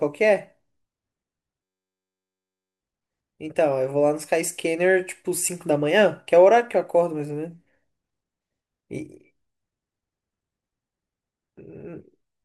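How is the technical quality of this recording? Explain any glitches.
The recording has one glitch, a system hang loop from 1.63 to 2.81 s. A 10.67 ms slice of speech repeats over a hundred times as a steady 93.8 Hz buzz, which fits a 512-sample buffer replaying while the system froze.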